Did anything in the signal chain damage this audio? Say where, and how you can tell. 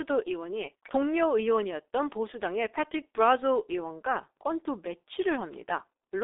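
Yes, at the codec: a G.723.1 codec runs throughout, with nothing above 3.8 kHz, muffled hoarse speech and smeared consonants, which fits a roughly 6 kbit/s stream.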